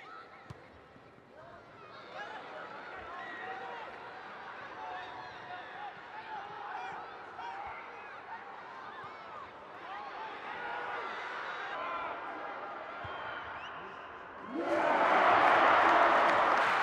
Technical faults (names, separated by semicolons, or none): section at the wrong speed